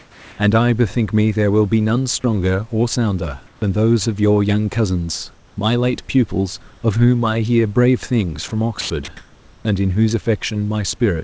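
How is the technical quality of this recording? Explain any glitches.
Two kinds of glitch affect the speech, in pauses and within the speech itself, heard through a call path that has nothing above 8 kHz, which fits a G.722 wideband codec.

Comfort noise in place of the background occurs at 0.00–0.38 s, 3.47–3.62 s and 9.17–9.65 s. The real background, sitting about 27–34 dB below the loud parts, turns into steady, featureless hiss. It is about 2 dB quieter at the start, about 1 dB louder at 3.5 s, and level at 9.2 s. The likely cause is discontinuous transmission, with the receiver synthesising noise while the sender stays silent.

Sound dropped by the voice detector occurs at 8.48–8.51 s, 8.81–8.90 s and 9.05–9.08 s. Brief slivers of sound, 30 ms, 60 ms and 30 ms long, vanish into flat noise. The likely cause is the detector mistaking quiet sound for background and halting transmission.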